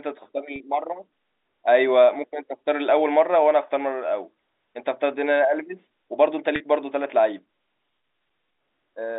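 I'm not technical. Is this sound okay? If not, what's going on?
No. Packet loss with pitch repetition at 0.56 s and 6.56 s: 40 ms of speech dropped out each time, and the receiver repeated the last sliver of speech, so you hear a brief buzzy hold.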